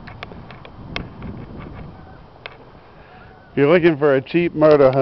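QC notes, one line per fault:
No faults found.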